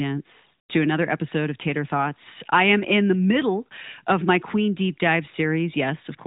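Heard through an AMR narrowband mobile codec whose light coloration fits roughly a 12.2 kbps mode, with nothing passing above 3.8 kHz, the speech shows no technical fault at any point.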